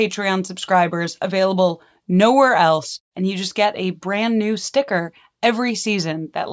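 No technical faults can be heard anywhere in this speech recording. Nothing in the sound at any moment points to a problem in how it was captured or delivered.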